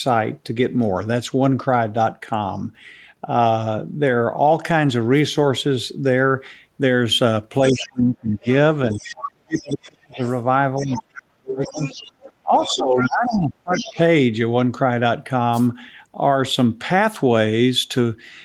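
From 7.7 to 9.61 s, a second voice leaks through about 15 dB below the talker. It sits under the speech as a faint, separate band of harmonics on a spectrogram. It is likely the other side's voice leaking through, where the echo canceller left part of the loudspeaker signal in the microphone. The same leak returns from 10.22 to 11.02 s and from 11.63 to 13.92 s.

From 7.71 to 10.21 s and again from 10.78 to 13.99 s, the talker is pulled down hard while the other voice is present, dropping by as much as around 40 dB and about 35 dB respectively. The voice dips and breaks up for roughly two seconds in each span. On the waveform the envelope collapses into gaps, and the spectrogram shows the high end thinning out. This is likely speech suppressed in double talk: the canceller could not tell the talker from the echo and attenuated both.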